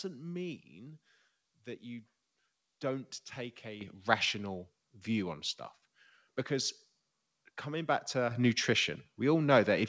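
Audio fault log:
3.81 s and 8.31 s, microphone volume stepped up: the input gain rises in one step, by about 9 dB just before "rational view on stuff" and about 6 dB right after "coming back". Voice and background noise jump together, so the waveform envelope widens abruptly and the spectrogram brightens uniformly across the band, which stops at 8 kHz through the call path.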